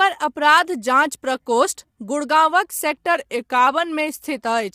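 From the start, the speech carries low-delay AAC compression damage: a rough, grainy texture with noise filling the gaps between pitch harmonics and a thin, synthetic-sounding top band. Low-bitrate coding in a codec like AAC-ELD likely causes this, and the damage level fits roughly 32 kbps.

From 3.15 to 3.67 s, a drift correction step slows playback by about 5.8 percent and drops pitch by about 104 cents, roughly a semitone. It is likely clock-matching software changing rate to manage its buffer. Speed and pitch move together and then snap back, which sets it apart from a pitch-only glitch.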